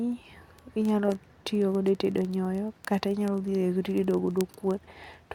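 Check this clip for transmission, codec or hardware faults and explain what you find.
One hardware fault, word clock ticks, runs from 0.12 to 5.34 s. Sharp ticks come roughly every 30 ms as unlocked clocks drift, with a one-sample slip at each. They appear as thin vertical spectrogram lines and tiny waveform discontinuities.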